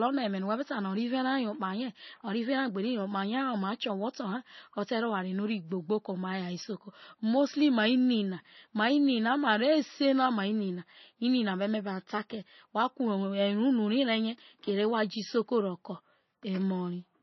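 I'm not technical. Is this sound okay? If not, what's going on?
No. From start to end, the speech carries heavy damage of the kind MP3 compression leaves, most likely from an encoder given too little data to work with. Nothing is left above about 5.9 kHz, so the voice sounds dull and muffled, and s sounds lose their crispness. The encoder also discarded quieter detail that flickers in and out, giving a watery, swirly quality with metallic chirps around hissy consonants.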